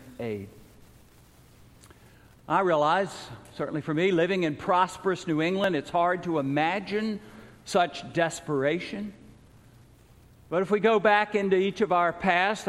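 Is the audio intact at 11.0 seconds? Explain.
Yes, at 11.0 seconds the audio is intact, with no dropout, click, distortion or other fault at that moment.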